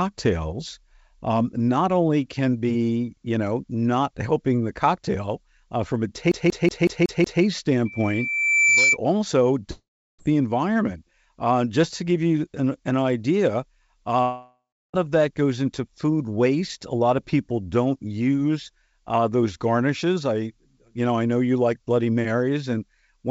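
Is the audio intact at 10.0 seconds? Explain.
No. From 9.71 to 10.21 s, just before "the environment", a fading buzz or hiss trails into silence, likely a long network dropout that lost about half a second.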